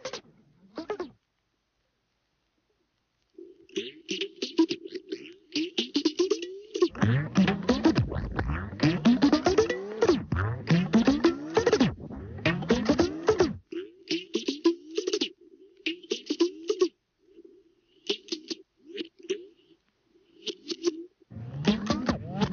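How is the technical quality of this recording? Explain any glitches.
The recording shows no technical glitches at any point, with the signal remaining steady and intact throughout.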